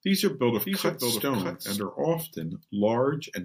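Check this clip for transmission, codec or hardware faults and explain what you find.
One fault is present, a doubled audio track running from the opening of the speech clip until about 1.82 s, where the second copy cuts off abruptly. A full-band duplicate trails the original by roughly 0.7 s at about 5 dB lower, likely from a second, slower capture path or an edit holding two offset copies. It differs from acoustic echo or reverb because there is only one repeat, with no decay tail and no room colouring.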